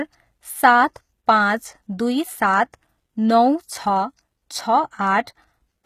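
Across the whole speech clip, likely HE-AAC compression: the treble is synthesized rather than coded. Nothing appears above 14.9 kHz on a spectrogram, and s sounds turn gritty and metallic, fitting a low bitrate near 20 kbps.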